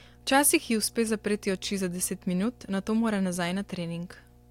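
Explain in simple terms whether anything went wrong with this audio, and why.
Mains hum runs under the speech from start to finish: a steady, low buzzing tone at 60 Hz that never changes, whether anyone is talking or not. It comes from the electricity supply leaking into the recording, typically through a ground loop between connected equipment or a transformer sitting too close to a cable. That stray power-line current gets picked up as part of the audio, so it sits beneath the voice the whole time.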